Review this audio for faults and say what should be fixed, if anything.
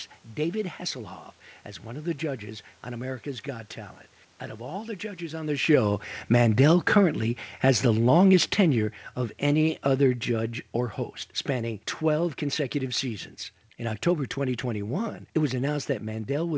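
From 5.59 s, just after "the judges on the", the speech sinks steadily until 13.11 s, ending about 11 dB quieter, and the room background falls with it. That shared drop identifies automatic gain falling: the AGC judged the input too loud, or its background noise too strong, and lowered its gain gradually. A talker moving, as happens around 5 s, would not pull the background down. Lower the input level at the source so the AGC never needs to back off.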